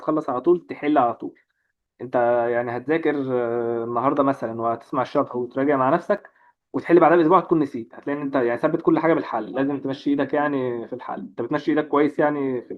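At 6.17 s there is a gap between stream segments. The timestamps at the 6 s segment boundary leave an 8 ms hole that the player fills with silence, producing a brief, hard-edged dropout.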